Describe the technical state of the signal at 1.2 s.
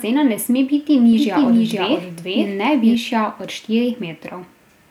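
At 1.2 s the speech is heard twice: a second, equally loud copy trails the first by about half a second, full-band and dry, with no reverberant tail, so it reads as a stutter-like echo rather than room sound. This doubled audio track runs from 1.13 s to 2.95 s and cuts in and out abruptly at those points. The likely cause is the same signal reaching the mix a second time through a slower path.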